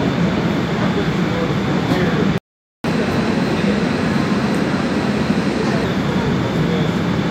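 At 2.38 s the sound stops mid-flow and the output stays silent until 2.84 s, a gap of about 0.46 s. This is a playback stall, most likely the player running short of data or its audio thread being held up. The sound returns at 2.84 s.

From 2.84 s to 5.84 s the sound runs fast and high. This is catch-up at higher speed. The player works through its backlog by resampling at 1.15 times normal speed, which raises the pitch by about two semitones, and it returns to normal at 5.84 s. Speed and pitch rise together and hold steady for the whole span, so it is not a slow drift or wow. Its direct link to the preceding silence marks it as recovery from the stall.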